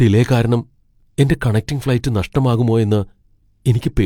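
A speech clip with one overlap between stream segments, running from 1.03 to 1.06 s, right after "ഡിലേ കാരണം" and just before "എന്റെ കണക്റ്റിംഗ് ഫ്ലൈറ്റ് നഷ്ടമാകുമോയെന്ന്". Two segments claimed the same stretch of time, so the player trimmed roughly 38 ms of audio that was never actually duplicated. The result is a small skip. On the waveform the trace jumps abruptly at the splice, and a spectrogram shows a thin vertical broadband line there. The spacing of segment boundaries in this audio points to segments of about 4 s.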